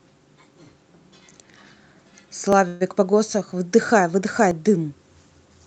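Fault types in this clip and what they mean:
Audio missing between chunks: The speech jumps forward slightly at 0.54, 1.53, 2.53, 3.52 and 4.51 s. Each skip removes only a few milliseconds, so no syllable is lost, but the join is abrupt. The skips repeat about once a second. That regular spacing points to a recorder or processor working in one-second chunks. It likely drops a small piece each time it closes one chunk and opens the next.
Call audio freeze: From 2.67 to 2.83 s the sound stalls. The last bit of speech is stretched into a short fading buzz lasting about 131 ms. Then the speech resumes exactly where it stopped, with nothing missing. The clip is simply that much later from this point on. This likely comes from the jitter buffer of the Opus call path running dry while packets were delayed, and filling the wait with a continuation of the last sound.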